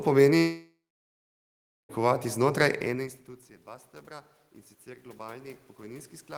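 A speech clip with two system faults. From 0.37 s to 1.91 s there is a long network dropout, likely caused by packets failing to arrive: about 1.5 s of audio never reaches the receiver and is never played. The receiver extends the last sound briefly as a fading buzz or hiss, then leaves roughly 1.1 s of near silence before the speech resumes with the lost stretch simply missing. Around 2.5 s the voice level shifts as the talker moves relative to the microphone, which is not a system fault. From 3.65 s, right after "ene institucije", to the end there is automatic gain rising. The input has dropped by about 24 dB, so the gain control judges it too quiet and turns its gain up gradually. The voice and the room noise behind it swell together over the following seconds instead of holding a steady level.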